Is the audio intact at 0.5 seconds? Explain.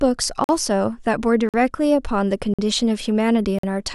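No, not quite. A gap between chunks leaves a hard-edged hole of silence from 0.44 to 0.49 s, ending just at that moment. Unlike a dropout, no speech is lost: playback simply pauses at the join of 1.0-second chunks, then resumes.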